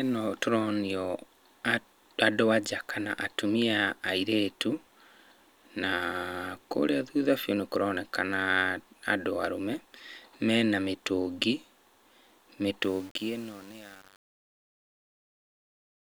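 Speech, whose fade-out from about 13 s grows gritty between 12.83 s and 16.08 s. This is truncation distortion on a fade: the undithered level stage left too few bits, which fits a 7-bit resolution, so the quiet tail collapses into square steps.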